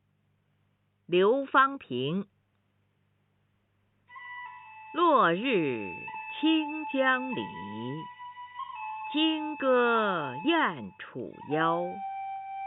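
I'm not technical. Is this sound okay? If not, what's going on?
Yes, it sounds okay, and nothing stood out as a problem when listening to it.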